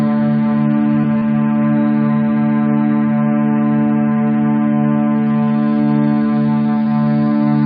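At 1.01 to 1.05 s and again at 1.19 to 1.23 s, the everyday sounds in this recording show short concealed packet loss. About 20 ms of audio failed to arrive in time on each occasion. The receiver filled each gap by extending the sound that came just before it, then blended back into the real signal. Each one is heard as a brief smear or wobble. A short transient there may be lost.

From 4.66 s to the end, the audio plays as a time-stretched section. Its pace drops suddenly to about 0.65 of normal speed, while the pitch stays put. Holding pitch while slowing down means short fragments get repeated to fill the extra length. The likely cause is software stretching this part of the audio to fit a required length.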